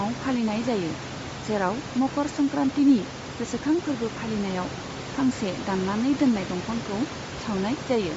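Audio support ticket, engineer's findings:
Speech band stops near 7.7 kHz for the whole clip. Plainly audible breathy, grainy edge on the upper voice. Likely Bluetooth LC3 compression, fitting about 32 kbps with 10 ms frames, zeroing upper bands and noise-filling them. Room noise sits about 12 dB below speech.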